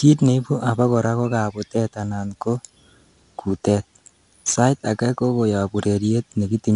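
A speech recording with 4-bit ADPCM compression across its whole length, and the damage is plainly audible. Each sample is coded as a coarse 4-bit step from a prediction, so a gritty hiss rides on every loud syllable and sharp onsets smear where the step size lags. Nothing survives above 10.7 kHz, which fits a sample rate near 22 kHz. On a spectrogram, a hard ceiling at that frequency sits over level-tracking broadband noise.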